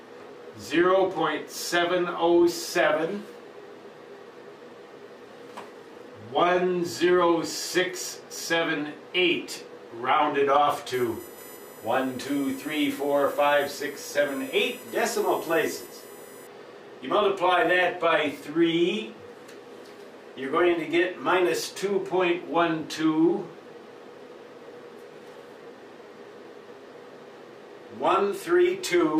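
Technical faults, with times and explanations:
10.93 to 16.47 s, USB whine: the USB bus draws current in 1 ms frames, and that load leaks into the audio path through power or ground. The result is a steady fixed-pitch whine built on 1 kHz, strongest at its 13 kHz multiple, roughly 20 dB below the sound.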